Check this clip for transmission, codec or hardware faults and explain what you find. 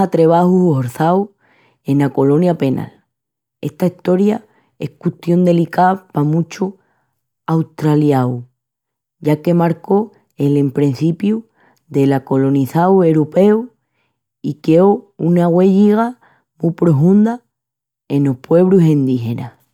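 I found no transmission, codec or hardware faults in this clip.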